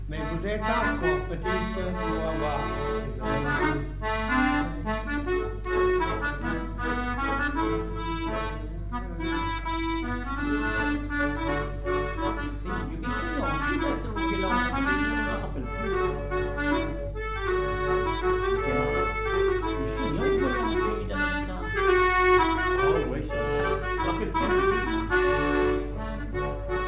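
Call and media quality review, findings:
Nothing to flag here; I listened all the way through and didn't hear any issue worth a ticket.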